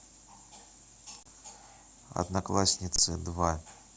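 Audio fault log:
1.23 s and 2.96 s, underrun with held sample: the speech stops for about 28 ms and then 24 ms because the output buffer ran dry and the converter held its last value. On the waveform, this shows as a flat line, and on the spectrogram, as a blank gap. Roughly 20 to 30 ms of audio was lost before the data resumed.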